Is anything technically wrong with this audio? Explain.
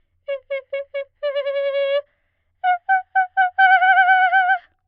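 No, nothing technically wrong turns up here; this bit of music just sounds the way it should.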